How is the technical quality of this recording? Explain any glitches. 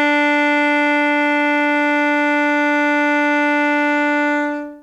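Nothing in the music stood out on listening as a glitch or technical problem.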